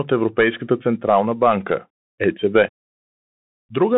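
Right from the start the whole thing runs through a Bluetooth CVSD headset codec, the narrowband one-bit delta scheme, which fits a 64 kbps link. The band sits at roughly 150 Hz to 3.5 kHz, so everything sounds boxed in, with plainly audible grainy hiss underneath and scratchy sibilants.

Then at about 3.69 s there's unconcealed Bluetooth headset packet loss: a couple of packets go missing between headset and phone, leaving a 7.5 ms hole with hard edges that nothing smooths over, so you get a quick tick or dropout.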